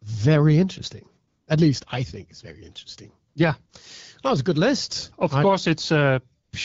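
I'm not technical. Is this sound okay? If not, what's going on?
No. In a few short pauses, at 1.27 to 1.47, 3.33 to 3.35, 3.65 to 3.69 and 6.43 to 6.51 seconds, the phone switched to AMR comfort noise. The real background is replaced by smooth artificial hiss, which clicks in and out.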